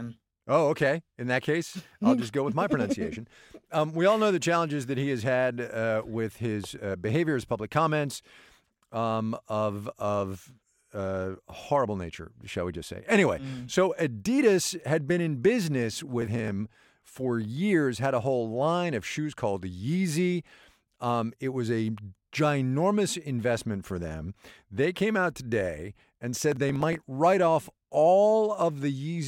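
At 16.22 to 16.51 s, and again at 26.52 to 27.03 s, the speech picks up a burst of processor overload crackle: a gritty tearing that stops once the load passes. The processor repeatedly misses its deadlines for very short buffers, likely about 0.7 ms each, and skips them. On the waveform, each event shows as a cluster of tiny hard-edged gaps. On the spectrogram, it appears as dense, thin vertical broadband streaks.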